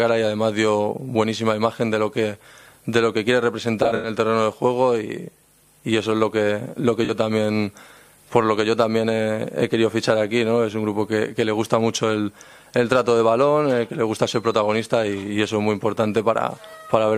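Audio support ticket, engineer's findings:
AAC frame loss with concealment, 3.82–4.09 s. About 0.15 s of audio is missing, scattered over roughly 0.21 s. The longest gap is around a tenth of a second. The decoder repeats the last good spectrum, so the patch sounds smeared and noisy. This points to several frames lost in a burst.

AAC frame loss with concealment, 7.05–7.11 s. A shorter 43 ms loss gives a brief phasey, smeared patch. The decoder covers it from the preceding spectrum, which suggests two frames were dropped.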